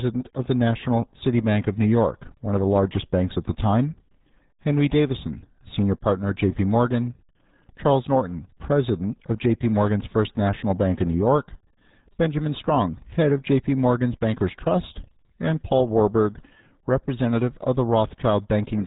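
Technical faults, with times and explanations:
Throughout, RealAudio 14.4 codec: the speech is muffled and gargly, with heavy coding damage and nothing above 3.8 kHz. That fits an 8 kbit/s dial-up-era speech codec. It models the voice so coarsely that upper bandwidth disappears and the remaining spectrum warbles and smears.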